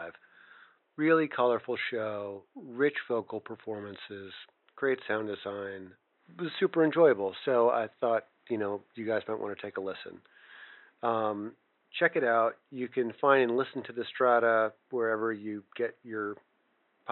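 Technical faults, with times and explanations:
No technical faults are audible in the signal, and the only background is the room's own noise, about 46 dB below the speech, which belongs to the recording space rather than to the system.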